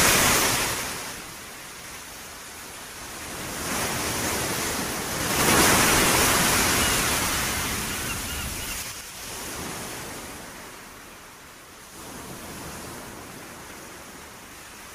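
From 5.11 to 5.57 s, zipper noise rides on the sound as the level rises by roughly 15 dB. The gain jumps in steps of about 3 dB, around ten a second, with no smoothing. Each jump leaves a small click, so the rise ticks. From 8.73 to 9.10 s, the same fault returns as the level drops by roughly 20 dB, in coarser steps of about 5 dB.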